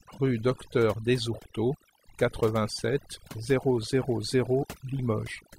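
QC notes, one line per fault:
Throughout, overdone noise removal: the noise reduction was set too aggressively, so frequency bands sitting near its noise estimate are pulled down or gated out, taking low-level parts of the speech with them. The background drops and breaks up into twinkling specks.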